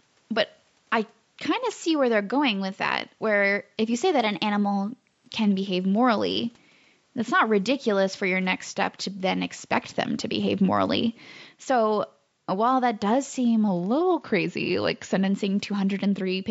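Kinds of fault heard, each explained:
Drift correction step: from 4.19 to 5.28 s the speech runs about 6% fast and sits about a semitone sharp (101 cents), and from 13.68 to 15.28 s it runs about 6% slow and 108 cents flat, snapping back each time. This is likely a clock-matching resampler jumping its rate to refill or drain a buffer. A spectrogram shows the harmonics shifting up or down as a block, and the waveform's syllables compress or stretch.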